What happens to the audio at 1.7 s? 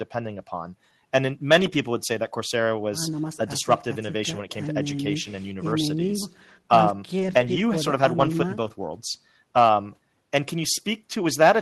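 A lost packet rebuilt from error correction runs from 1.61 to 1.75 s. The decoder played low-bitrate backup copies of the missing packets, so nothing drops out, but that stretch sounds rougher and noisier.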